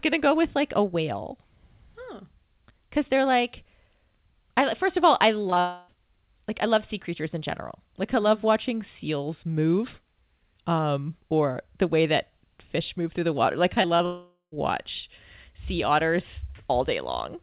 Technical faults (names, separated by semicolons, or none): short concealed packet loss; long network dropout; repeated packet loss (robotic sound)